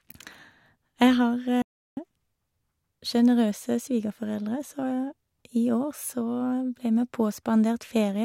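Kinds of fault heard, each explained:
Playback stall: the player likely ran out of data or was blocked, so the speech drops to silence for 350 ms, from 1.62 to 1.97 s.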